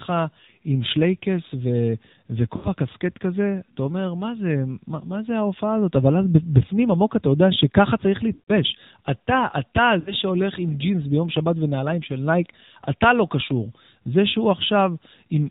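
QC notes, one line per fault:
throughout: AMR narrowband mobile codec. The speech is muffled and buzzy, with nothing above 4 kHz and a thin, synthetic edge to the voice. The coding damage is plainly audible, which points to a low AMR-NB mode around 7.4 kbps, where too few pulses model each frame.
2.56–2.68 s, 8.34–8.52 s, 10.00–10.14 s: lost AMR speech frames. The voice briefly smears into a drawn-out, fading warble, then returns weak. The decoder is repeating the last good pitch and vocal tract settings at falling gain over gaps of 80, 140 and 60 ms.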